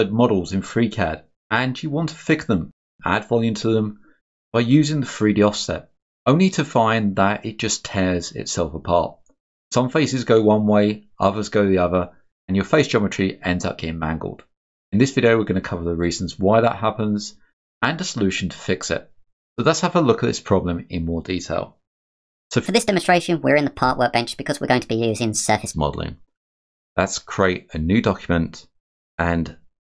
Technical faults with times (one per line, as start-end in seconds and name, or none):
22.66-25.73 wrong sample rate